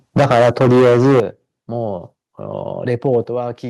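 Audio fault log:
0.16–1.2 s, microphone overload: the sound is flattened and harshly crackly, with peaks driven roughly 13 dB past the converter's limit and about a third of samples clipped. The likely cause is an input volume set so high that the converter's limit squares off the waveform tops.
0.19 s, microphone volume stepped down: the level drops abruptly by about 3 dB in a single step, right as the distortion begins, likely because the call software detected clipping and cut the device's input volume.
1.2 s, microphone volume stepped down: a larger sudden drop of about 10 dB in both the sound and the background ends the long distorted stretch, likely a second automatic cut to the input volume after the sustained overload.
3.05–3.09 s, microphone overload: a brief crackle where peaks exceed the converter's limit by about 1 dB and only a small fraction of samples are clipped. The likely cause is a loud moment pushing the converter to its limit even at the reduced input volume.
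3.24 s, microphone volume stepped down: the sound and background fall abruptly by about 5 dB in one step shortly after that peak, likely the software lowering the input volume again in response to the new clipping.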